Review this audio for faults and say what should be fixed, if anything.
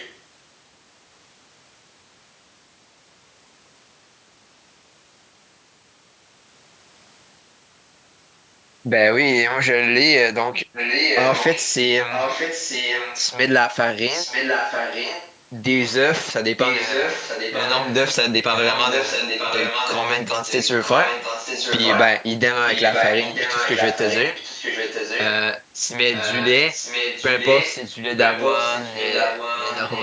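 Echo leak at 0.00–0.19 s (faint), then nearly as loud as the original at 10.73–13.29, 14.15–15.34, 16.56–17.95, 18.56–25.28 and 26.13–30.02 s. The far end likely played the call on a loudspeaker, and its echo canceller let the pickup through. The result is a distinct copy arriving 940 ms later rather than the smooth tail of room reverberation. To prevent it, use a headset at the far end or improve that side's echo cancellation.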